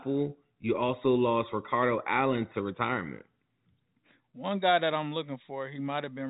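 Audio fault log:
No fault to log.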